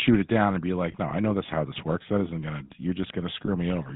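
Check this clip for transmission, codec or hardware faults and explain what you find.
The speech has been through a GSM mobile link, with two brief dropouts.

GSM full-rate codec, throughout: a vocal-tract model is driven by regularly spaced pulses, which fits the 13 kbps full-rate coder, and the line passes only 150 Hz to 3.7 kHz. The result is a plainly audible buzzy, gravelly roughness with muffled highs.

Lost GSM frames, at 0.92–0.95 s just after "it down and be", and at 3.46–3.50 s: the decoder repeats the last good frame's settings. Each gap fits a single lost 20 ms frame and is heard as a short, rough, metallic ring.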